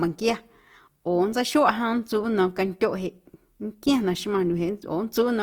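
Opus compression, present throughout the speech, is plainly audible as grainy, rough texture in place of clean detail. The damage likely comes from the Opus codec running in its CELT music mode at a low rate, which fits roughly 24 kbps. Short of bits, the encoder preserves each band's energy but rebuilds the fine structure by folding in lower bands or filling with noise, so harmonics turn coarse and hissy rather than swirly. Bandwidth stays full, reaching about 20.2 kHz.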